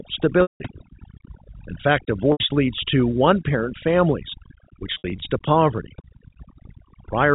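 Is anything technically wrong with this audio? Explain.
Yes, this speech has two faults. Throughout, the background sits near silence with twinkling specks: overdone noise removal, where an over-aggressive noise reducer also suppressed quieter voice components along with the noise.

Packet loss with pitch repetition appears three times. At 0.42 to 0.60 s, a buzzy held tone fades into silence as 180 ms is lost. At 2.32 to 2.40 s, just before "leads to one parent", a shorter 80 ms gap sounds like a briefly sustained note. At 4.94 to 5.22 s, between "to one parent families" and "to poverty", 140 ms of losses are scattered over 280 ms, the longest run about 60 ms. In each case the receiver repeated the last pitch period to cover missing packets, which fits 20 ms packets. The 4 kHz telephone bandwidth of the G.711 link is audible but is not a fault.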